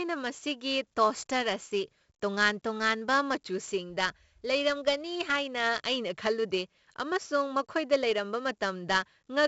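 Throughout, 4-bit ADPCM compression adds gritty, level-following hiss and harsh attacks. Nothing sounds above 7.7 kHz, which fits a 64 kbps stream. The damage is heavy.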